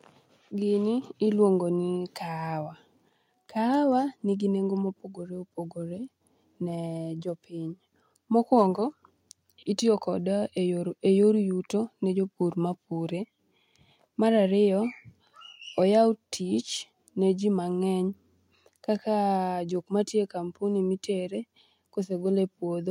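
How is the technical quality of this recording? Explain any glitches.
The recording has one glitch. At 1.02 s the microphone volume is stepped up: the call software judged the input too quiet and raised the device gain by about 6 dB in a single jump. The speech and background noise get louder together and stay louder. Unlike a talker leaning closer, the background rises along with the speech, and unlike a gradual gain ramp, the change is instant.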